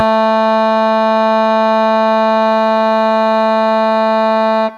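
No technical faults can be heard anywhere in this music clip. Nothing breaks into the sound at any point, with no interruption, jump or sudden change to mark a problem.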